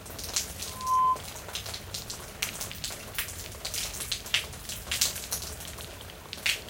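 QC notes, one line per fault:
0.67 to 1.22 s, loudspeaker feedback squeal: a steady 1 kHz tone swells up over roughly a third of a second and sits around 10 dB above the sound. The mic is hearing its own speaker, and at that frequency the loop runs away until it's cut.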